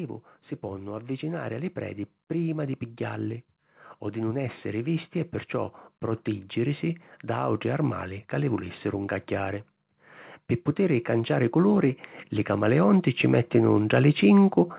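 From 10.76 s to 14.0 s the level climbs by about 6 dB as automatic gain rising sets in: the gain control judged the input too quiet and raised its gain gradually, so the speech and the background swell together. The band-limited sound, with nothing above 4 kHz, fits a G.711 mu-law call path.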